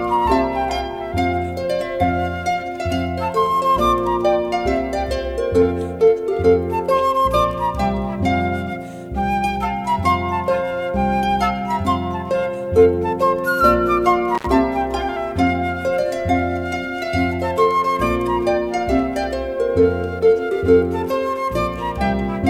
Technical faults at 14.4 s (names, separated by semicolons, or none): intermittent contact